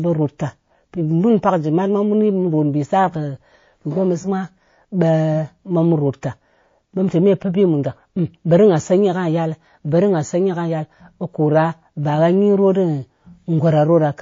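Speech running the whole way through carries plainly audible MP3 compression damage, most likely from encoding at a very low bitrate (the sound fits something around 32 kbps). The quieter detail in the voice has a watery, swirling quality as weak frequency components flicker in and out from frame to frame. That flicker, with chirpy s sounds and smeared consonant onsets, separates it from a simple low-pass filter, which dulls the top without any warble.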